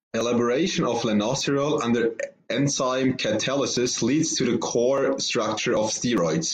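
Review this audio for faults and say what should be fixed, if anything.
No faults; nothing needs fixing.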